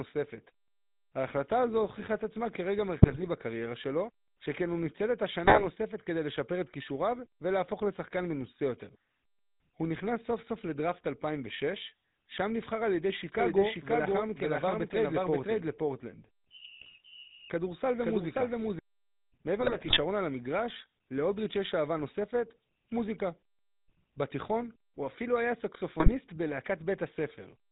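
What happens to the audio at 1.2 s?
At 1.2 s the speech carries GSM full-rate codec damage, present throughout the clip: a vocal-tract model driven by sparse regular pulses gives a buzzy, gravelly roughness, with nothing above 4 kHz, unlike a plain muffling low-pass.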